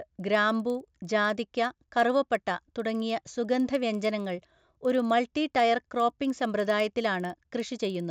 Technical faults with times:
0.00-8.10 resampler restarted on every block

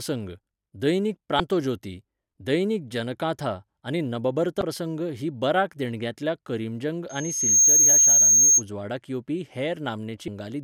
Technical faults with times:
1.37-1.40 damaged data in a compressed stream
4.59-4.62 damaged data in a compressed stream
7.09-8.63 loudspeaker feedback squeal
10.27 damaged data in a compressed stream

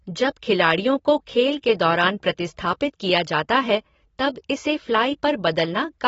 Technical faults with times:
0.00-6.07 AAC compression

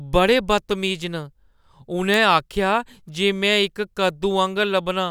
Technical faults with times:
0.53 bit error spike
2.14 bit error spike

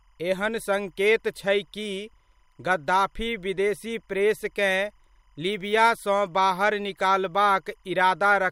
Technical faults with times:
0.00-8.51 timecode bleed

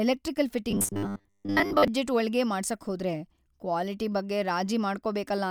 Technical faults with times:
0.71-1.88 robotic sound from repeated short buffers

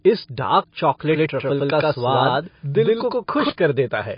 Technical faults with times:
0.00-4.18 MP3 compression
1.09-3.49 doubled audio track

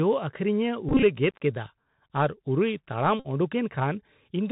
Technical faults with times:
0.00-4.51 Bluetooth CVSD headset codec
0.89-1.03 Bluetooth headset packet repeated
3.19-3.27 Bluetooth headset packet repeated

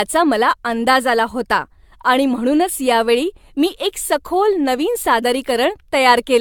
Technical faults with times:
0.00-6.41 generation loss

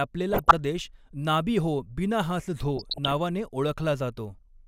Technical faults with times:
0.33-0.51 DAB burbling
2.77-3.13 DAB burbling

